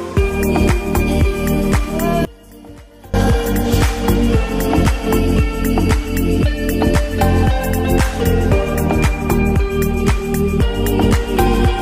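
From 2.25 to 3.14 s, one stereo channel has most likely been flipped in polarity, an instance of one channel inverted. Whatever the two channels share now cancels when they are combined to mono, so the shared content collapses and the level falls by about 24 dB. For just under a second the sound drops to a faint residue made only of the differences between left and right.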